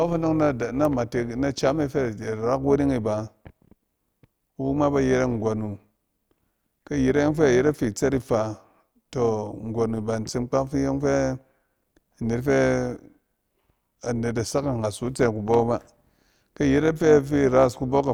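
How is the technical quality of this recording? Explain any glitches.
The recording has one persistent fault across the whole clip.

Overlap-add ripple, throughout: the speech was split into windowed frames and rejoined with overlaps that don't sum evenly, so level swings by about 6 dB once per frame, around 200 times a second, producing a metallic buzz with extra tones around each note.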